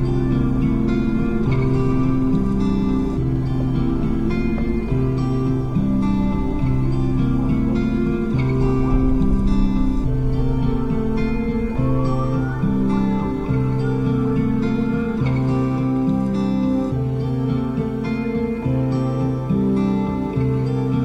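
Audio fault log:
No technical faults were detected in this audio; the signal path shows nothing that calls for a log entry.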